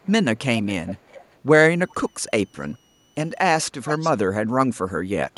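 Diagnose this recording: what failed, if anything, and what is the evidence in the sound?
Call processing: an echo canceller likely passed residual loudspeaker pickup, so an echo leak replays the speech about 0.4 s late at 0.02–0.11, 0.65–0.69, 0.86–1.36, 1.90–1.94, 2.61–2.74 and 3.83–4.12 s, strongest in the last.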